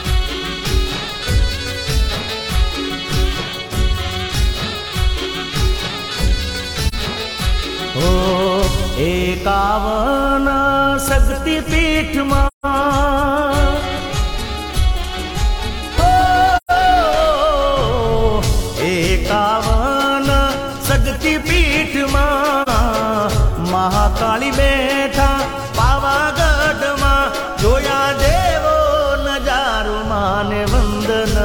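Soft-edged dropouts fade the sound out and back in at 6.88 s (about 43 ms), 12.47 s (about 171 ms), 16.57 s (about 128 ms) and 22.62 s (about 43 ms). This is AAC frame loss with muting: missing frames were decoded as silence, and overlapping windows smoothed the edges.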